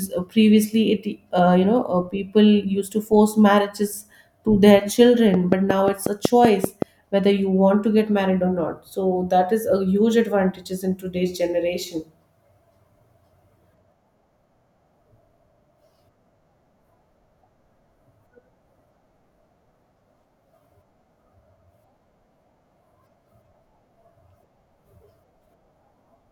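A steady ticking cuts across the speech from 5.34 to 6.83 s: a train of clicks, around ten alike pulses at a regular 5.4 per second, standing roughly 20 dB above the speech. Such evenly paced pulses are likely interference from nearby equipment or a faulty connection or power supply.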